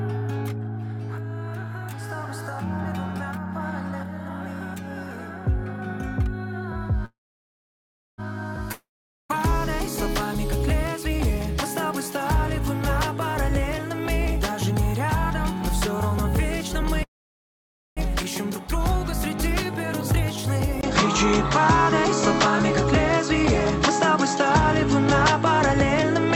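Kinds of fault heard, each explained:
Call audio freeze: Delayed packets likely drained the jitter buffer, so the last sound is carried on briefly and then goes silent before resuming where it left off. This happens at 7.05 s, lasting about 1.1 s with roughly 1.04 s of silence, and at 17.03 s, about 0.94 s with 0.89 s silent.
Long network dropout: A stretch of audio is lost outright. From 8.72 s the last sound is extended for a moment and then falls to silence for about 0.44 s, likely from a network outage. When sound returns at 9.31 s, about 0.58 s of material is missing.
Jitter buffer speed-up: Between 14.26 s and 15.55 s the receiver trims short pitch-period slices to drain excess buffered audio. Playback runs about 4% fast at unchanged pitch, removing roughly 50 ms in total across that span.
Input switched to a poorer device: At 20.81 s a brief 20 ms silence marks an input change, likely to a lower-grade microphone or headset profile. 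From there to the end nothing is present above 7.8 kHz, the level shifts by about 5 dB, and a new noise floor appears roughly 45 dB down.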